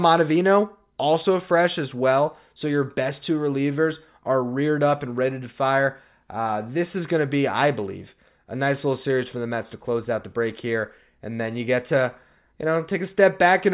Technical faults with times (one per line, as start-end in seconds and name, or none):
none